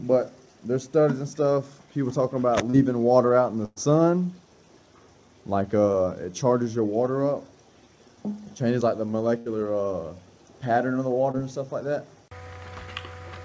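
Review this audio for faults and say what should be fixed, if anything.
Short concealed packet loss: packets arrived too late or not at all at 2.70–2.75 s, 5.92–5.96 s and 11.32–11.35 s, and the receiver patched each hole by extending the preceding sound for roughly 20 to 35 ms. Each patch is heard as a brief smear or wobble.

Burst of packet loss: consecutive packets went missing at 3.65–3.78 s and 9.38–9.48 s, about 100 ms and 80 ms. The receiver kept stretching the last sound while fading it down, giving a held buzz or dying hiss before the audio jumps ahead.

Adding forward error correction and a slightly deeper jitter buffer on the network path would prevent most of these dropouts.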